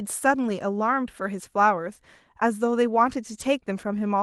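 No technical faults are audible.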